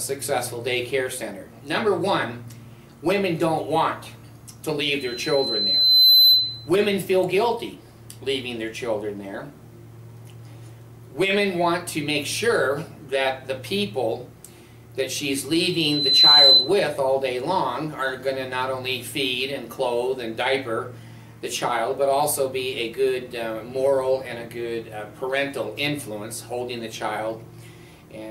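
Loudspeaker feedback squeal at 4.99 to 6.69 s and 15.70 to 16.73 s: the microphone hears its own loudspeaker, and at 4 kHz the loop's gain passes one. That tone swells over about a second, then half that, to roughly 10 and 15 dB above the programme.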